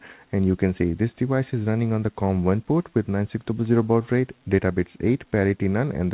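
No technical faults can be heard in the audio, which has the narrowband sound of a call path carried by G.711 A-law at 64 kbps, with nothing above 4 kHz.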